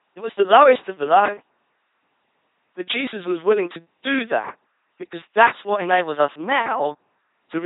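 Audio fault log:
throughout: LPC-10 vocoder. The speech comes out as a flat, buzzy robot voice, and the damage is heavy. Each moment gets rebuilt from a small all-pole filter fed by either a pulse train or noise, so you hear a mechanical buzz on voiced stretches and hiss where the voiced/unvoiced call flips wrong. Nothing sits above 3.9 kHz, and the coarseness fits a 2.4 kbit/s stream.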